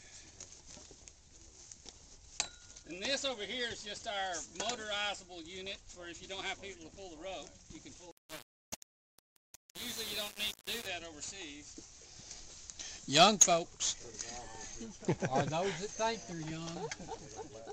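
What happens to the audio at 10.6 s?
At 10.6 s the audio is inside a stretch of low bit depth without dither, from 8.11 to 10.86 s. Grainy, signal-following distortion sits about 10 dB below the sound, likely from undithered rounding to roughly 5 bits.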